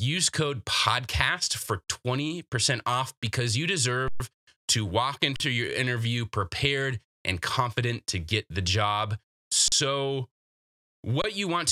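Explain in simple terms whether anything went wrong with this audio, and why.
Something did go wrong: an underrun with held sample, five times. The playback buffer ran empty, so the output froze on its last value and the speech briefly went flat and silent. It happens at 1.84 s after "code podcast for" (40 ms), at 4.08 s (120 ms), at 5.36 s after "to walk" (40 ms), at 9.68 s after "to get the job" (40 ms), and at 11.22 s (22 ms). Nothing was lost. The speech resumes where it stopped, so each return is soft.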